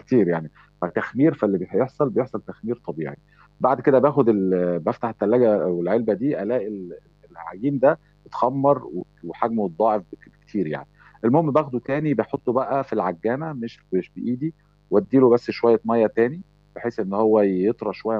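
A speech recording picks up mains buzz throughout: interference from the 50 Hz supply, with sharp switching spikes twice per cycle, has leaked into the signal path. It lays a steady, raspy buzz, rich in harmonics into the kilohertz range, well below the speech.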